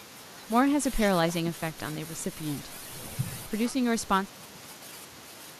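Nothing in this bit of speech jumps out as a technical fault, so there's no glitch to point to at any moment.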